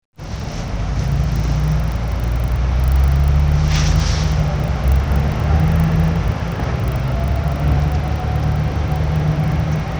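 From start to finish, the resampler was restarted on every block. The conversion from 24 kHz to 48 kHz was done in separate 40 ms chunks, with no filter history carried across boundaries, so each block edge was interpolated against missing neighbours and picked up a small error. Those errors recur 25 times a second, giving a regular tick or low buzz that rides on the sound wherever there is signal and fades in quiet stretches.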